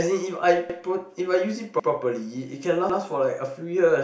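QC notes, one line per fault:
0.70 to 3.00 s, overlapping chunks: at 0.70, 1.80 and 2.90 s you get a little stutter where about 100 ms of the speech plays twice. Each roughly one-second chunk starts before the previous one finished, so every join replays that overlap.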